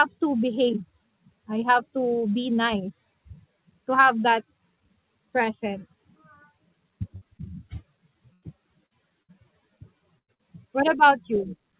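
The audio passes through a call path band-limited to nothing above 4 kHz, which fits the G.711 A-law codec at 64 kbps, and from 7.16 s it suffers a run of dropouts.

At 7.16 to 7.23 s comes a burst of packet loss, about 60 ms of the signal gone. The receiver stretches the last sound into a decaying buzz or hiss, then jumps ahead. Further bursts follow at 8.33 to 8.44 s and at 10.19 to 10.30 s, where roughly 100 ms vanishes each time, and at 9.23 to 9.31 s and 10.34 to 10.41 s. These are heard as gaps with a fading tail where material is skipped.

Between them, at 7.37 to 7.41 s and 8.86 to 8.93 s, is short concealed packet loss: only 20 to 40 ms went missing, and the decoder fills it from the preceding pitch or noise, then crossfades back. What separates it from the bursts is that it registers as a brief smear or wobble rather than an audible gap, though a short consonant can disappear inside it.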